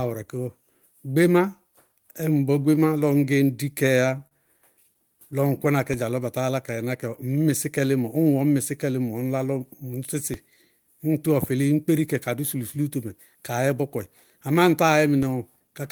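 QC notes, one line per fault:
4.27 to 4.33 s, short stall from a late packet: a packet arrived late, the jitter buffer ran dry, and the receiver held the last sound for about 42 ms before resuming where it left off. Nothing is lost, but everything after is delayed by 42 ms. On a spectrogram, a brief smeared, static band appears.
10.34 s and 15.23 s, DC step: the waveform's zero line jumps abruptly and then drifts back toward centre, consistent with a roughly 2 Hz high-pass removing the offset. Each step is heard as a low thump under unchanged sound. On the waveform, the baseline shifts and recovers along a slow curve.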